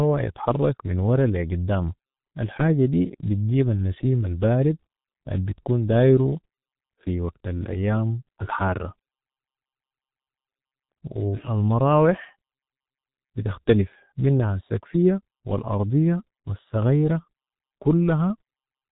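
From the first second to the end, the speech carries the marks of heavy G.723.1 codec damage. Nothing above roughly 3.8 kHz survives, so the sound is muffled and dull, with sibilants and fricatives smeared into each other. The low bitrate, which fits the 6.3 kbit/s mode, forces the codec to model the voice in coarse 30 ms frames that update slowly, leaving a hoarse texture and blurred consonant onsets throughout.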